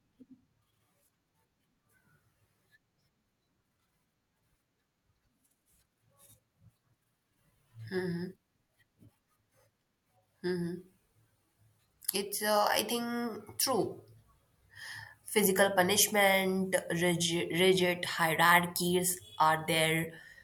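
No technical faults are audible.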